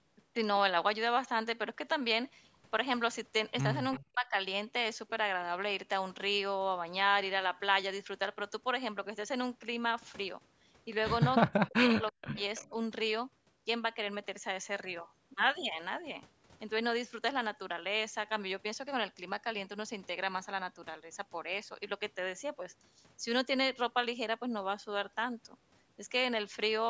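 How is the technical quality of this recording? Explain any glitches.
The recording has two recurring call glitches, both clustered around 4 s and 12 s. The speech is band-limited to 8 kHz, as expected from call microphone processing.

Echo leak occurs at 3.92–4.02 s, 12.08–12.12 s and 12.56–12.69 s. A faint, delayed copy of the speech appears, lagging by 330 ms. It sits far below the main speech, around 25 dB down. The likely cause is an echo canceller failing to remove loudspeaker sound from the far end's microphone.

Speech suppressed in double talk occurs at 3.99–4.35 s, 11.42–12.4 s and 12.62–12.77 s. The speech drops, almost to silence in the first two spans. The last is a milder dip. The likely cause is both sides talking at once, so the echo canceller turned down both its own talker and the loudspeaker echo.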